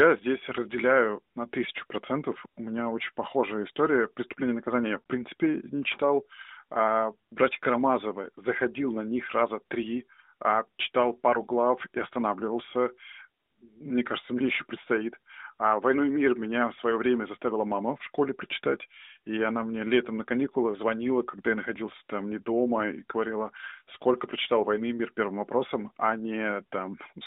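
Between "и наказание я" and "в принципе не читал", at 5.00 to 5.02 s, the speech smears and briefly fades, as lost AMR speech frames force the narrowband decoder to conceal a gap fitting about three frames.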